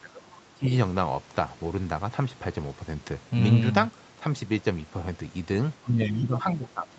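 Right from the start, between 0 and 0.68 s, the speech dips hard, down by something like 20 dB at its worst, with about half a second of it affected. It happens again from 5.83 s to the end, less deep at around 15 dB. That's speech suppressed in double talk, likely the echo canceller confusing the talker with loudspeaker echo while the far side was talking, and turning both down.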